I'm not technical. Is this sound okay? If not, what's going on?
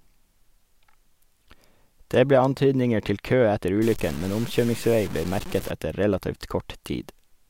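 No. From 3.82 to 5.71 s the speech turns grainy and gritty, and quiet parts crackle or drop out. This is low bit depth without dither. The sound was likely stored with only about 5 bits, rounded down with no smoothing noise.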